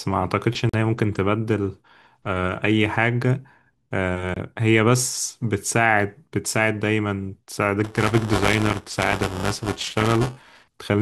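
Blocks of digital silence hit this speech at 0.69–0.74 s (about 43 ms) and 4.34–4.36 s (about 21 ms), likely where the output buffer went unfilled and dropped to silence. The lengths fit 2048- and 1024-sample blocks. Buffer tearing from 7.84 to 10.64 s makes a robotic 345 Hz buzz: writer and reader crossed inside each period, so a small slice of every buffer replays audio from roughly 10 ms earlier, which fits a 128-sample buffer.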